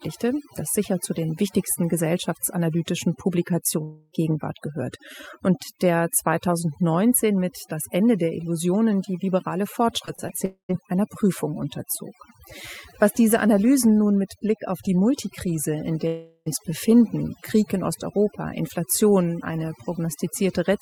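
Across the whole recording the background sits at near silence with twinkling specks. This is overdone noise removal: a noise reduction stage set far too aggressively pulls individual frequency bands down or off whenever they resemble its noise estimate, and the quieter parts of the voice get stripped away along with the hiss, leaving those isolated sparkles behind.

From 3.83 to 4.13 s the sound gives way to a buzzy continuation of the last moment that fades out over the gap before normal audio resumes further along, with nothing of the missing stretch recovered. The cause is likely a long network dropout of roughly 280 ms, during which the receiver extended what it last had instead of real audio.

Around 10.05, 10.15 and 10.28 s come three brief smears or wobbles in quick succession, each where a fragment of about 20 ms goes missing. These are short concealed packet losses: the decoder bridges each small hole by extending the preceding sound, following its pitch where voiced and using shaped noise otherwise, then blends back into the real signal.

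Immediately after, from 10.45 to 10.71 s, the audio decays into a fading hum and then about 110 ms of silence before returning. From 16.07 to 16.48 s a similar fading continuation fills a gap of about 400 ms, ending in roughly 40 ms of silence. Both are likely long network dropouts, with the lost stretch replaced by a decaying extension rather than the original audio.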